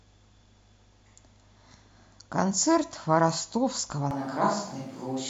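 At 4.11 s the speech turns abruptly roomy and hollow and stays that way to the end. The low end thins out, reverberant space surrounds the speech, and a bed of room noise sits roughly 25 dB below it, while overall loudness stays much the same. The likely cause is a switch to a distant microphone: the close microphone's signal dropped out and a pickup farther from the talker took over, capturing more room than mouth.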